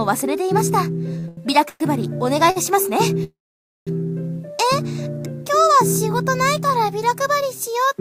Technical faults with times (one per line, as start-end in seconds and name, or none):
1.19-1.39 short stall from a late packet
1.69-1.82 call audio freeze
2.50-2.58 short stall from a late packet
3.24-3.89 call audio freeze